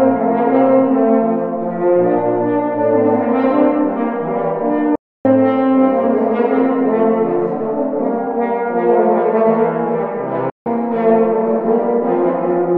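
Playback stalls at 4.95 s and 10.50 s cut the audio dead mid-flow, for about 290 ms and then about 160 ms, before it resumes. The player most likely ran short of buffered data or had its output thread blocked.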